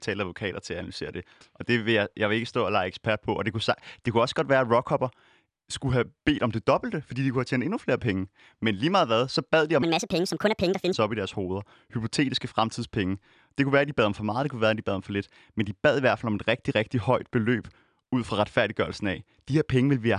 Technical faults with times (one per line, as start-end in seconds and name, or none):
9.82-10.93 wrong sample rate